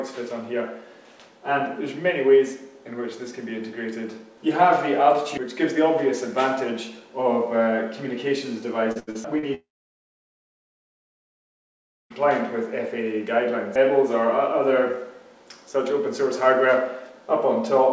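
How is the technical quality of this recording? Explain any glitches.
Two network glitches hit the middle of the clip, back to back. The band stops at 8 kHz throughout, which fits a G.722 call codec at 64 kbps.

From 8.92 to 9.45 s there's repeated packet loss, and it sounds robotic. Four short holes, the longest about 78 ms, get patched by stretching the previous sound, so roughly a third of that half-second turns choppy.

Then from 9.54 to 12.13 s the audio goes away for about 2.6 s. That's likely a long network dropout. A brief fading fill gives way to near-silence for most of it, and when the sound returns the missing stretch is simply gone.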